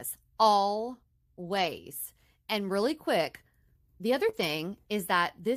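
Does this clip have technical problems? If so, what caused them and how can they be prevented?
Yes. Lost packets rebuilt from error correction, at 1.41 to 1.83 s and again at 4.33 to 4.43 s: the missing stretches, about 220 ms and 60 ms, were replayed from low-bitrate backup copies carried in the following packets. The speech never drops out, but those sections sound rougher and noisier. Prevention: reduce packet loss on the network path, for example with a wired connection or less competing traffic, so the decoder rarely needs the coarse backup copies.

Short concealed packet loss at 4.29 to 4.35 s: about 40 ms of audio never arrived in time. The decoder covered roughly 36 ms by extending the preceding sound before blending back, giving a brief smear just before the second rebuilt stretch. Prevention: a slightly larger jitter buffer lets late packets arrive before they must be concealed, and the same network fixes reduce outright losses.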